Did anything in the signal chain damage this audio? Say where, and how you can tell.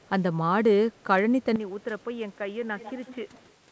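Yes. From 1.56 s to the end, the speech abruptly narrows in band, drops about 10 dB and gains a new noise floor. This is likely an input switched to a poorer device at capture, not codec band-limiting, which reaches 8 kHz earlier.

Between 2.77 and 3.51 s, a separate copy of the speech trails by 148 ms, about 20 dB down. This is likely an echo leak from a far-end loudspeaker past the echo canceller, not room reverberation, because it is a distinct repeat rather than a smooth decay.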